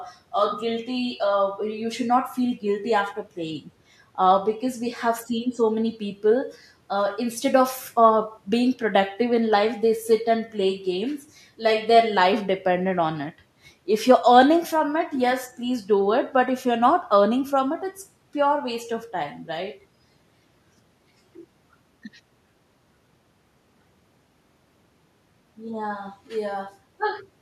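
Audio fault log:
No faults can be heard anywhere in this speech clip.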